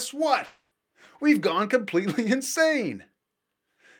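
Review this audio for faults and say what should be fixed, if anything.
At 0.45 s the speech breaks off into a smeared buzz that carries on from the last sound and fades, with no true silence, until the speech resumes at 0.73 s. About 260 ms of speech is missing, and the speech picks up later rather than where it stopped. This is a long network dropout, likely caused by a gap in packet delivery, with the receiver's loss concealment stretching the last audio across the hole. Preventing it calls for a more stable network path or a deeper jitter buffer with forward error correction or retransmission, so short outages are covered before playback.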